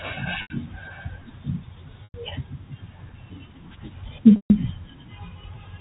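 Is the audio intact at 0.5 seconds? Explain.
No. From 0.42 to 0.50 s, about 80 ms of the speech stream was lost in transit, which fits four 20 ms packets going missing. The receiver bridged the gap by repeating the last pitch period and fading it out over about 50 ms. Because this loss outlasts that fade, the packet loss with pitch repetition is heard as a brief held, buzzy tone that dies into silence before the speech resumes through a short cross-fade at 0.5 s.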